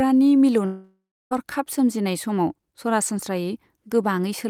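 From 0.65 to 1.33 s, the speech becomes a fading buzz, then silence. About 0.66 s is lost, likely from a long network dropout.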